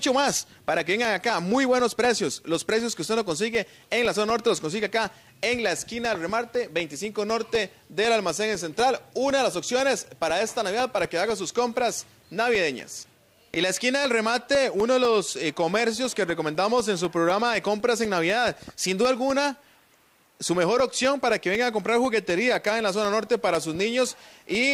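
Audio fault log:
0.30–24.55 s, periodic USB or driver dropouts: steady ticks every 0.25 s, each a roughly 1 ms silent gap where a blocked bus or driver lost samples.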